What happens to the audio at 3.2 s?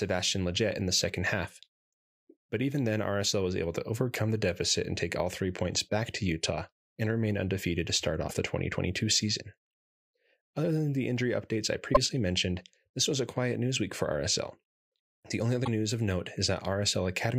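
Nothing goes wrong at 3.2 s: the speech continues intact through that moment, with no audible fault.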